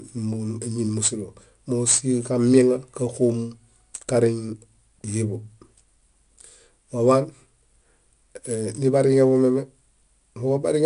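4-bit ADPCM compression runs through the entire clip. Each sample is coded as a coarse 4-bit step from a predicted value, so a plainly audible gritty hiss rides on every loud syllable at its level. Nothing above 10.6 kHz survives, which fits a reduced sample rate.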